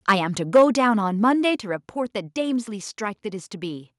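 From 0.09 to 0.12 s and again from 0.55 to 0.64 s, the loudest speech peaks crackle harshly, likely from microphone overload. The peaks exceed the converter's limit by about 3 dB, then about 5 dB. On the waveform they appear as flat-topped peaks, and on a spectrogram as broadband vertical streaks. At 0.57 s, during the second distorted burst, and at 1.56 s, voice and background both drop abruptly, by about 2 dB and then about 4 dB. This is likely the microphone volume stepped down, and it shows as sudden steps in the waveform envelope.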